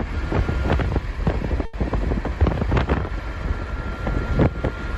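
A late packet emptied the jitter buffer, causing a short stall from 1.65 to 1.75 s: the receiver stretched the last sound about 80 ms, then resumed without loss.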